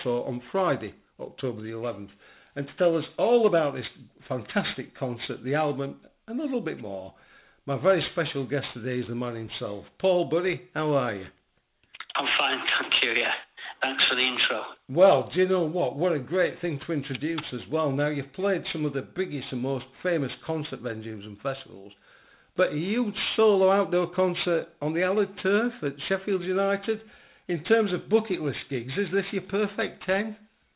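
Aliasing runs through the whole clip. The audio was resampled down without a proper low-pass filter first. Content above 4 kHz folded back below it, which fits a drop to an 8 kHz rate. The folded energy sits about 15 dB under the sound, adding gritty, metallic tones.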